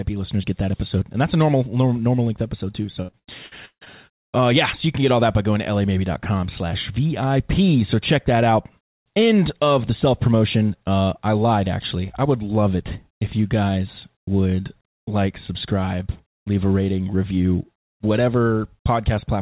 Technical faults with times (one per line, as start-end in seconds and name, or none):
2.82-3.88 repeated packet loss (robotic sound)